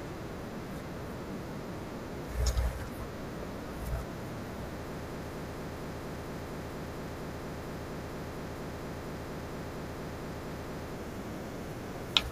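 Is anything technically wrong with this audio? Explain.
Yes, there's a broken-record loop. From about 5.00 s to 10.95 s the speech locks onto one fragment about 0.23 s long and repeats it back to back, 26 times, so you get a stuttering, machine-gun repetition for nearly six seconds. It's likely the player, encoder or stream stalled and kept resending the last chunk it had buffered. Whatever should have played during that stretch is simply gone.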